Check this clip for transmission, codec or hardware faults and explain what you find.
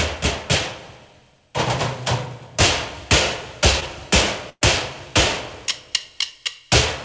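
Two transmission faults stand out, both from lost audio on a call link whose sound stops at 8 kHz, which fits a wideband call codec such as G.722.

At 3.80 to 3.83 s there is a brief smear, where the sound is stretched for an instant before the real audio returns. This is short concealed packet loss: about 20 ms never arrived in time, and the receiver papered over it by extending the preceding sound.

At 4.49 to 4.63 s the sound hangs as a held, fading tail and then drops out briefly before playback resumes further along. This is a burst of packet loss: about 120 ms went missing, and the receiver kept continuing and turning down the last sound before falling silent for roughly 50 ms.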